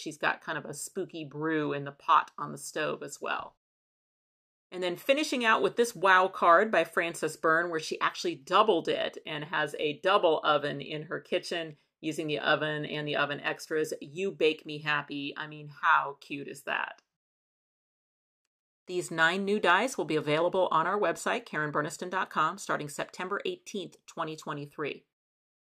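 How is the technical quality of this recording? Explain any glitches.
No glitches or technical faults can be heard here.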